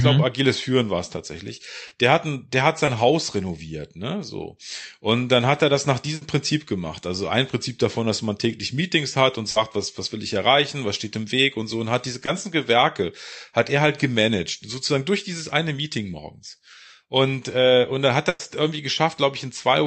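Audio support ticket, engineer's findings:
Short concealed packet loss, four events: 1.87–1.93 s, 2.85–2.89 s, 9.51–9.57 s, 12.25–12.29 s. Symptom: brief smear or wobble in the speech, each covering a 20–40 ms gap. Component: receiver-side loss concealment in the call path. Mechanism: late or lost packet, decoder extends preceding sound (pitch-based if voiced, shaped noise if not), crossfades back to real audio. Short consonants in these spans may drop out.

Burst of packet loss, two events: 6.15–6.23 s (60 ms missing) and 18.29–18.41 s (100 ms missing, no silent stretch). Symptom: held buzz or fading hiss, then speech resumes with a chunk absent. Component: jitter buffer and decoder concealment. Mechanism: consecutive packets lost or too late; last sound continued and attenuated across the gap. Audio runs through an Opus call path, band-limited to 8 kHz.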